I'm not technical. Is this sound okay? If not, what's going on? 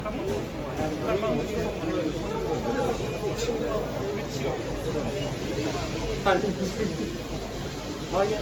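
No. It was likely compressed and re-saved about seven times over, causing generation loss throughout: the sound turns swirly, smeared and hollow, with blurred sharp edges.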